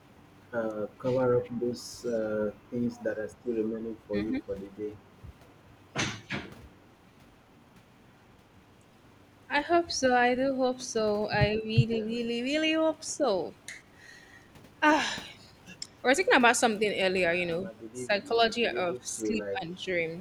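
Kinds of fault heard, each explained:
Speech suppressed in double talk: The speech dips in pieces from 0.69 to 4.53 s and from 9.65 to 19.82 s, with less than a second affected in each stretch. The first drops go as deep as about 20 dB, the later ones about 10 dB. The likely cause is an echo canceller turning down its own talker along with the loudspeaker echo while both talk.
Echo leak: A faint delayed copy of the speech trails it by 138 ms, from 1.43 to 3.03 s and from 9.74 to 11.99 s. It sits about 30 dB, then about 25 dB, below the speech. This is likely loudspeaker echo that one side's canceller failed to remove.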